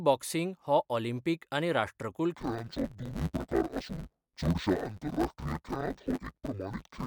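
From 2.35 s to the end, the speech turns dull and robotic, with a steady 100 Hz buzz and no clear octave drop. This is interleaved audio read as planar: each 10 ms block's alternating left-right samples were split into halves, smearing both channels at half speed.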